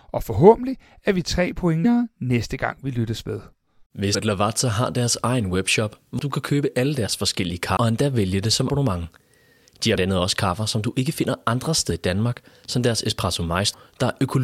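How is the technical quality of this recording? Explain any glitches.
The recording's technical quality is marred by repeated compressed frames skipped, at 1.84, 4.14, 6.18, 7.76, 8.69, 9.94 and 13.73 s. At each point, whole blocks of encoded speech never reach the output, so the audio leaps forward by a tenth of a second to nearly half a second, consistent with dropping several frames of about 23.2 ms each. Each join is heard as a sudden jump in the speech.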